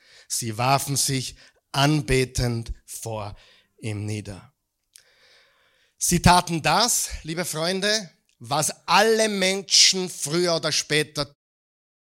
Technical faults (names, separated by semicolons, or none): none